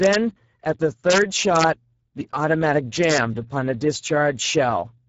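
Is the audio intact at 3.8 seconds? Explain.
No. At 3.8 seconds the speech sounds hoarse and noisy, with a grainy edge, and nothing reaches above 7.7 kHz. This Speex codec damage runs through the whole clip. Speex, a CELP speech coder, models the voice with a filter driven by an excitation signal. At this low setting it has too few bits to describe that excitation well, which fits a bitrate near 10 kbps.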